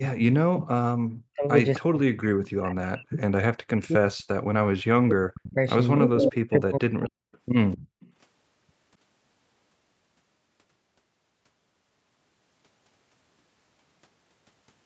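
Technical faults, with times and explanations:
0.28–1.47 s, 1.79–5.56 s and 5.99–7.27 s, speech suppressed in double talk: the speech dips by up to about 40 dB and breaks up, likely because the canceller mistook overlapping talk for echo.
1.74–1.8 s, 5.97–6.1 s, 7.32–7.38 s and 7.72–8.1 s, echo leak: short copies of the sound come back 257 ms late. Around 6 s the leak is as loud as the speech, while the others are faint. It's likely residual loudspeaker pickup that the canceller missed.
7.78–8.0 s, background gated by the echo canceller: the room sound drops by about 34 dB for a moment as the canceller clamps the mic, then it comes straight back.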